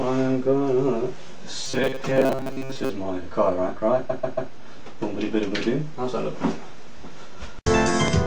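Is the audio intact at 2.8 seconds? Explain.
No. At 2.8 seconds the audio is inside a stretch of robotic sound from repeated short buffers, running from 1.65 to 2.90 s. The likely cause is fresh audio arriving too seldom, so a short segment of about 7.5 ms keeps being replayed while real audio is skipped, for roughly 70 percent of the span. This produces a rigid metallic buzz at 133 Hz. A waveform shows near-identical cycles every 7.5 ms; a spectrogram shows evenly spaced harmonics at multiples of 133 Hz.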